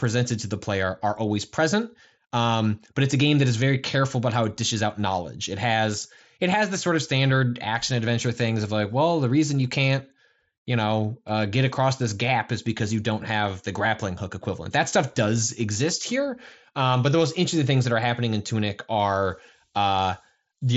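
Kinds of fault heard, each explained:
The speech comes through a Bluetooth mSBC headset link working as intended, with the wideband path carrying content up to about 8 kHz and no faults present in the signal.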